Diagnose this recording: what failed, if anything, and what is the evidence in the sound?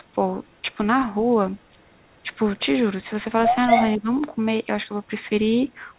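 Echo leak in the call processing: a copy of the voice trails by about 240 ms, faint at 0.45–0.59 s and 1.56–1.96 s, near full level at 3.68–4.0 s. The likely cause is a loudspeaker echo canceller that didn't fully cancel.

Speech suppressed in double talk, also in call processing: from 3.98 to 4.09 s the near voice dips by roughly 15 dB, likely because the echo canceller ducked everything while both sides overlapped.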